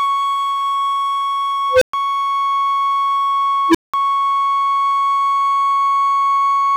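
Music with an unstable filter at 1.72 s and 3.69 s: tones around 500 Hz and 300 Hz swell within 95 ms and 52 ms, clip, then drop to silence for 120 ms and 190 ms. Acoustic feedback builds more slowly and never cuts out.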